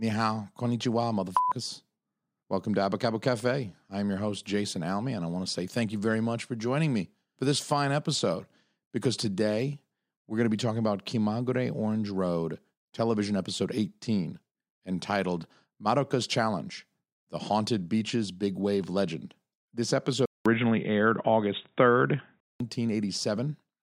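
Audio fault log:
20.26–22.60 s, input switched to a poorer device: after a 200 ms gap the speech turns dull and boxy, with a level shift of about 5 dB and a faint new noise floor roughly 50 dB below the signal; full bandwidth returns at 22.60 s. The cause is likely a mid-recording change of capture device, such as a headset dropping into its narrowband call profile, which brings its own tone, gain and background noise.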